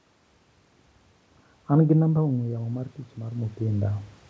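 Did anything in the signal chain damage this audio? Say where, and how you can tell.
Yes, in the call processing stage: automatic gain rising from 2.09 s to 4.05 s. Around 2 s the talker moves away and the level at the microphone drops by about 10 dB. The AGC responds by slowly raising its gain by about 6 dB over those two seconds. You can tell because the room noise swells along with the voice. On a spectrogram, the noise floor between phrases brightens steadily, and the waveform envelope climbs gradually rather than stepping.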